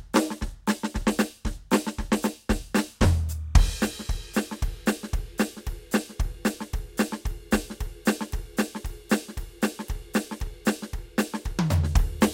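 From 2.81 to 4.81 s, timecode bleed enters the music: linear timecode leaking from a nearby line, far below the music, around 40 dB down. Its square wave flips between tones near 1 kHz and 2 kHz, giving a faint chirping warble. A spectrogram shows two thin flickering bands there.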